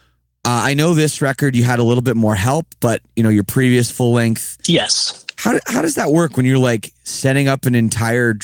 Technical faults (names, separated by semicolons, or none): none